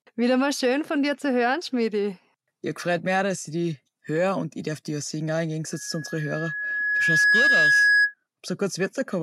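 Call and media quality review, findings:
Loudspeaker feedback squeal, 5.71–8.14 s. Mic picking up its own loudspeaker; loop gain above unity at 1.7 kHz. Single tone swells over roughly one and a half seconds, ends about 10 dB above the speech.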